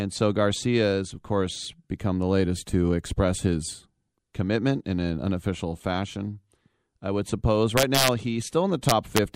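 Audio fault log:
7.78–8.08 s and 8.89–9.18 s, integer overflow: near the end of this speech clip, the gain stage was driven about 3 dB past full scale in the first stretch and about 2 dB past it in the second. The sum was not held at the limit, so it wrapped past the largest integer to the opposite extreme. Each peak that crosses the ceiling jumps across the whole range, giving harsh, violent cracks on the loud parts, far sharper than clipping would sound.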